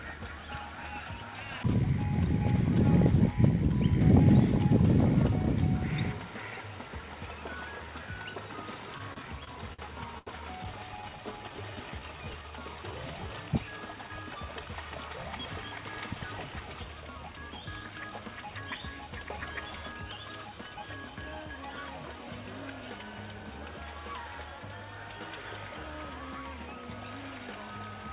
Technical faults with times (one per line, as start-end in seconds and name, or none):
8.98-9.80 repeated stalls (stutter)
10.18-10.29 short stall from a late packet
11.09-13.28 jitter buffer slow-down
15.09-16.82 jitter buffer speed-up